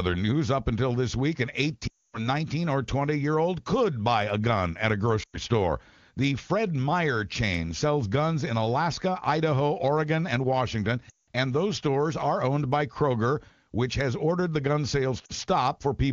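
Speech, carried in the AMR wideband (HD Voice) codec and sounding clear in a way that fits its top 23.85 kbit/s mode, smears and fades out four times. The gaps fall at 1.87–2.28 s (about 260 ms), 5.23–5.36 s, 11.09–11.27 s, and a brief drop at 15.25–15.33 s. These are lost AMR speech frames: corrupted frames were concealed by repeating the last good pitch and vocal tract settings at falling gain.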